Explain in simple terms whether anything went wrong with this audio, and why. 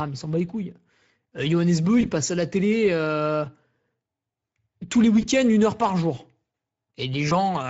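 Throughout the clip the speech has a noisy, hoarse edge that you can plainly hear. That is damage from the Speex codec, an older speech codec used for internet calls and game chat. It squeezes the voice into very little data, and some detail is lost in the process.

Three short glitches occur where the sound smears into a brief buzzy tone or a fading noise. They fall at 2.01–2.06 s just before "passe à la télé", at 5.21–5.26 s between "tous les" and "une heure par jour", and at 7.29–7.33 s. Each is VoIP packet loss concealed by the speech codec. About 20 ms of sound went missing, and the decoder filled the gap by stretching out what came just before. The voice stays weak or distorted for a moment afterwards, until the decoder catches up.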